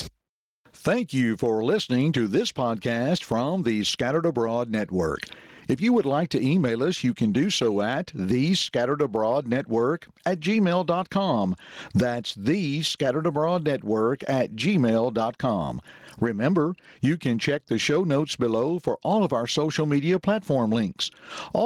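Gain pumping runs through the whole speech clip, with a level swing of around 25 dB. The likely cause is input gain set far too high for the microphone, with a fast limiter or compressor clamping down on every peak and releasing in the pauses. The result sounds squashed: loud and quiet passages sit closer in level.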